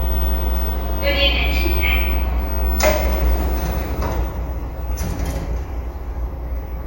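A recording of sounds, with no technical fault to be heard anywhere in it. Nothing in the audio calls for a time or a cause to be given.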